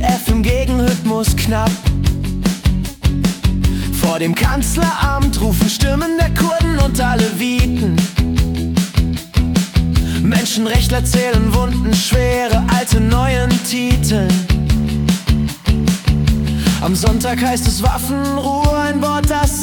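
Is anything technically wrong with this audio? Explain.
Yes. Timecode bleed runs from 14.76 to 17.80 s. Linear timecode at 25 frames per second leaks in from an adjacent track or cable. Its square-wave bits flip between tones near 1 and 2 kHz, producing a steady chirping warble roughly 30 dB below the main sound.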